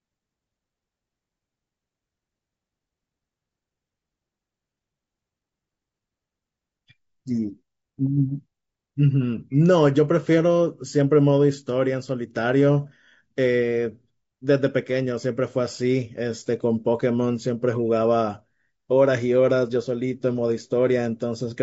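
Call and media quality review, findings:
Low-delay AAC compression, whole clip, speech throughout. Voice rough and grainy; noise audible between pitch harmonics; top band sounds thin and synthetic. Likely AAC-ELD at low rate, damage plainly audible, consistent with about 32 kbps. Short low-delay frames give coarse frequency resolution, so harmonics smear and bits run short; encoder fills gaps with noise and replaces upper band with a reconstructed approximation. Symptom constant, no time-localised events.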